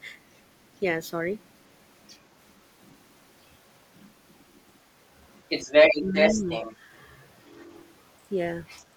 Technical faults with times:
0.03-2.14 other side's voice leaking through
2.50-3.33 other side's voice leaking through
3.95-4.77 other side's voice leaking through
5.35-6.76 other side's voice leaking through
6.02-6.47 speech suppressed in double talk
8.67-8.80 other side's voice leaking through

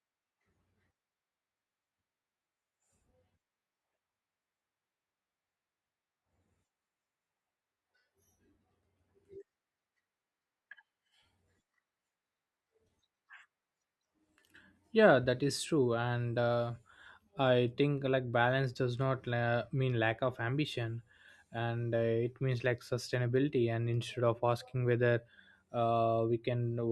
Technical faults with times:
none

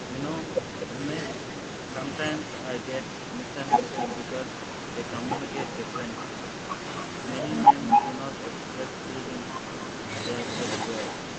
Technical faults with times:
0.00-1.07 echo leak
1.33-2.85 echo leak

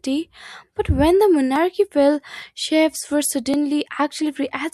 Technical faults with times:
1.56 overlap between stream segments
3.54 overlap between stream segments

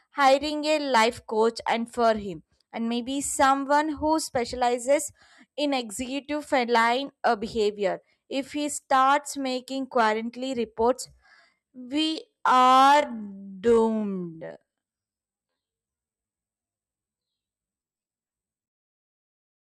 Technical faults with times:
11.00-19.69 time-stretched section

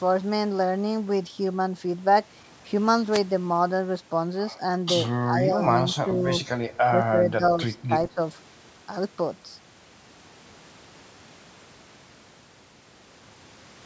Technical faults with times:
3.11-3.20 wireless microphone noise hit
5.24-6.25 speech suppressed in double talk
7.01-7.42 speech suppressed in double talk
7.88-8.20 speech suppressed in double talk

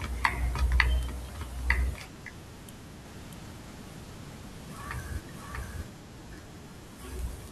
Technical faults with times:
3.05-5.89 doubled audio track

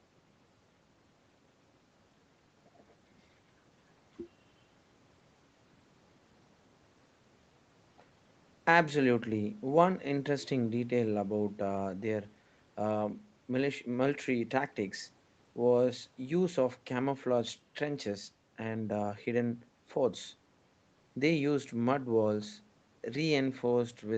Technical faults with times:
none

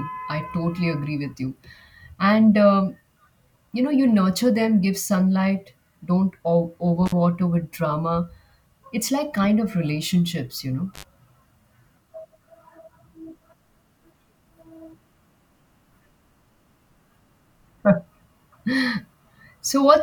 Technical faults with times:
7.06-7.12 intermittent contact
10.94-11.04 intermittent contact

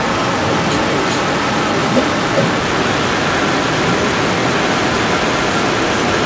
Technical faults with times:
0.00-6.26 stuck bit
0.00-6.26 echo leak

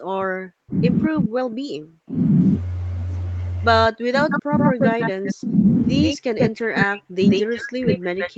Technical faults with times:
0.00-0.75 speech suppressed in double talk
1.07-2.16 speech suppressed in double talk
3.89-5.56 speech suppressed in double talk
4.30-5.33 echo leak
6.02-6.84 echo leak
6.12-8.38 speech suppressed in double talk
7.29-8.38 echo leak

